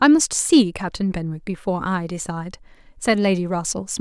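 No technical faults are audible.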